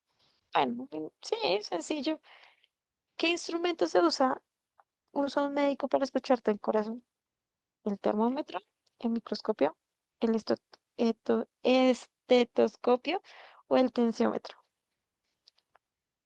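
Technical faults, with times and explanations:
No technical faults are present, so there are no times or explanations to give.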